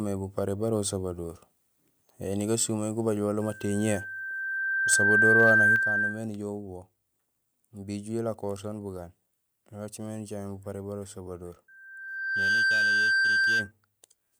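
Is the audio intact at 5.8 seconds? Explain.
No. At 5.76 s the speech and background drop suddenly by about 6 dB, a microphone volume stepped down. The call software likely lowered the input volume in one step.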